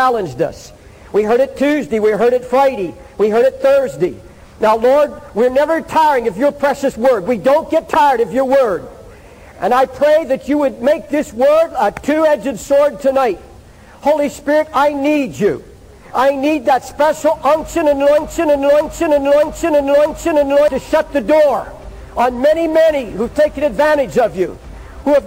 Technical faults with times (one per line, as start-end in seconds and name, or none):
18.18-20.68 broken-record loop